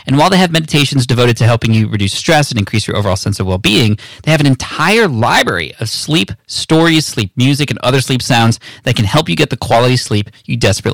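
From start to finish, the speech is driven about 12 dB past what one stage of the chain can pass, so hard clipping slices its peaks flat, roughly one sample in twenty. Those squared-off tops spray high harmonics, giving every louder syllable a harsh, buzzy fuzz.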